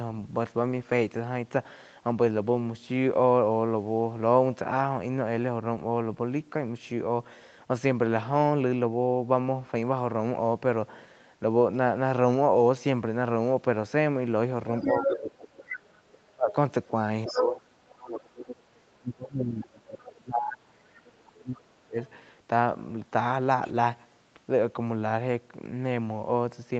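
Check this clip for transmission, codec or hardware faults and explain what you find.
Two echo-related faults appear in the second half of the speech, both from the call's echo cancellation. The band stops near 8 kHz, which points to a wideband call codec such as Opus at around 24 kbps.

Other side's voice leaking through, 14.8 to 17.45 s, 19.91 to 20.12 s and 21.25 to 22.1 s. A second voice likely from the talker's own loudspeaker, playing the far side, gets past the echo canceller. In the first stretch it is about as loud as the talker. Later it drops to about 20 dB and then about 30 dB below.

Speech suppressed in double talk, 14.92 to 21.97 s. While both sides speak, the canceller likely mistakes the talker for echo and turns everything down. The main voice dips by up to around 30 dB, in pieces adding up to roughly five seconds.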